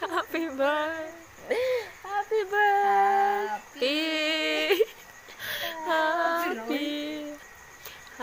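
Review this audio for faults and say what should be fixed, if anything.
Nothing here needs fixing, as the signal holds steady throughout with no audible technical faults.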